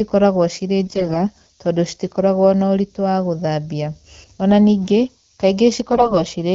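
A speech recording carries a steady, thin hiss from start to finish. It sits only around 20 dB below the voice and climbs sharply toward the top of the band. That is low bit depth with noise shaping: the audio is held at a word length that fits 7 bits, and the rounding error has been pushed upward in frequency, so it collects as bright hiss rather than spreading evenly. From 0.86 to 1.26 s, and again from 5.92 to 6.18 s, the voice keeps roughly its pitch and level but turns hoarse, scratchy and gargly, worse in the second burst. These are AMR bit errors. On a weak link the less protected bits of the codec frames arrive flipped while the checksum on the vital bits still passes, so the excitation pulses land in the wrong places and the fine pitch, gain and spectral values drift. The damage fits around a tenth of the bits corrupted in the first stretch and somewhat more in the second, across 16 and 12 frames respectively. 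The underlying AMR wideband (HD Voice) coding sounds clear with only light artefacts, consistent with 12.65 kbit/s.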